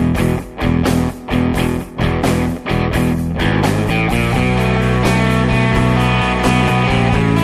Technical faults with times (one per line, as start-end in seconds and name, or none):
none